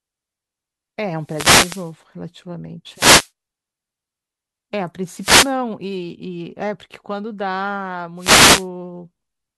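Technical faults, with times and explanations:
1.19–1.96 s, 2.92–3.30 s, 5.16–5.55 s and 8.17–8.68 s: wireless microphone noise hits. Each one is a brief swish of static over the speech, where the FM radio link faded as reflections cancelled and the receiver's noise floor rose up through the signal.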